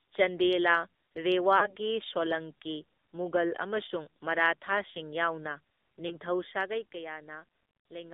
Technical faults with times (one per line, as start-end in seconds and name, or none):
0.00-8.13 AMR narrowband mobile codec
1.58-1.74 lost AMR speech frames
6.08-6.18 lost AMR speech frames